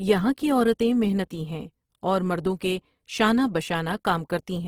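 From start to end, the speech sounds grainy and rough. This is likely Opus compression in its music mode, starved of bits, which fits about 16 kbps.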